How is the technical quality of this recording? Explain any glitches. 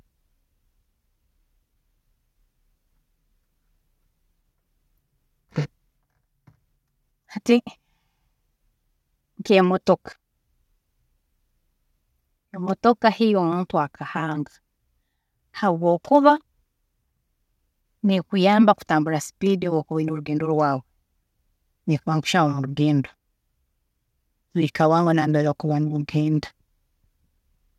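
The technical quality of this recording is sound, with no glitches to explain.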